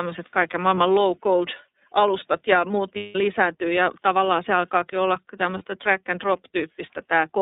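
From the start the speech sounds boxed-in and slightly rough and synthetic, with nothing above 3.7 kHz and little below 200 Hz. This is the iLBC codec, a narrowband VoIP coder whose thin, rough character fits its 30 ms frame mode at around 13.33 kbps.

At 0.75 s, 2.96 s and 5.58 s the speech briefly freezes into a held, faintly buzzy vowel-like tone, about 30 ms at the first and third points and 180 ms at 2.96 s. These are lost iLBC frames. When packets went missing, the decoder filled each gap by repeating the last pitch cycle mixed with noise. The longest gap fits about six missing frames. Because each iLBC frame decodes on its own, clear speech returns almost immediately after every gap.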